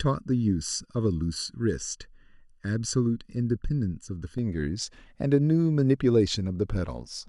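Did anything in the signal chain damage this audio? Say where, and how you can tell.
Yes. Channel delay (comb filtering) affects the speech from 0.0 to 4.38 s. It sounds hollow and phasey, with fixed notches from about 700 Hz upward. One channel arrives under a millisecond late. Summing to mono cancels evenly spaced frequencies. This points to the driver or buffer stage.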